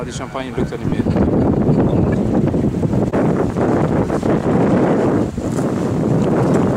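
At 0.89 to 0.92 s and again at 4.05 to 4.07 s, lost LE Audio frames leave gaps of about 30 ms and 15 ms. The LC3 decoder concealed each gap by repeating the last spectrum with scrambled signs, so tonal content briefly smears into noise. A plain dropout would instead leave silence or a hard click. The gap lengths fit 7.5 ms frames. Light codec softening also runs throughout the clip.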